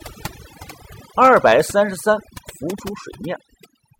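Throughout the speech, overdone noise removal has pulled noise-adjacent frequency bands down hard, leaving near-silent gaps with twinkling specks.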